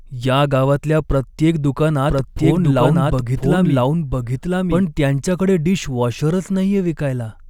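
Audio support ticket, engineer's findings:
Doubled audio track, 2.09 to 4.83 s, after "या गावातल्या प्रत्येक" and clearing before "त्यांच्याकडे डिशवॉशरच". Second full-band copy of the speech trailing about one second behind, at roughly the same level as the original. Dry, no decay or room colour; abrupt entry and exit. Likely a second capture via slower path or misaligned edit holding two copies.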